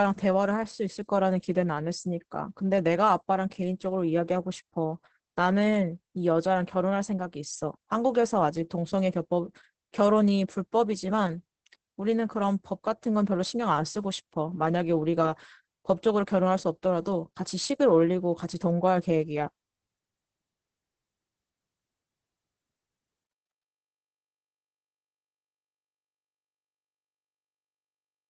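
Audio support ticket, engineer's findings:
Muffled, hoarse, slightly robotic throughout; nothing above 8.5 kHz. Opus voice compression, SILK wideband at a rate pointing to about 10 kbps, coarse excitation coding.

Gritty tail on the fade-out, 23.24–28.30 s, worst 25.64–28.30 s. Truncation distortion on a fade: fade stage undithered, fits roughly 12-bit output.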